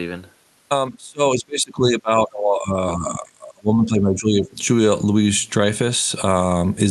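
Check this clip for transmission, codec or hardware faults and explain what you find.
One fault stands out, in a clip of speech carried over a call path whose Opus-style coding caps the top end near 12 kHz. Speech suppressed in double talk, from 0.90 to 4.56 s: the echo canceller likely mistook near-end talk, heard over far-end playback, for echo and attenuated both, so the voice sinks by up to about 25 dB across roughly three seconds.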